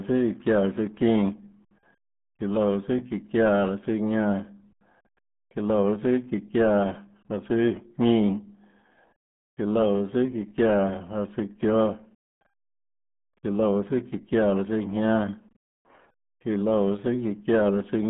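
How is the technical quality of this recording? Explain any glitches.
Poor: the whole recording went through the RealAudio 14.4 codec. Throughout the speech, a roughly 8 kbit/s dial-up coder discards everything above 3.8 kHz and heavily damages the rest, leaving speech muffled and gargly.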